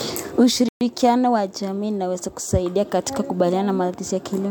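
At 0.69 s the speech cuts to silence for 124 ms, resuming at 0.81 s. This is a playback stall, likely from the player running out of data.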